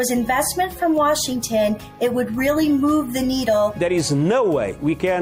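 At 3.95 to 3.99 s a corrupt frame was decoded: damaged bits in the compressed data were played as if valid, placing energy at wrong frequencies. The 40 ms span points to about two frames, heard as a brief chirp-like blip peaking near -30 dBFS.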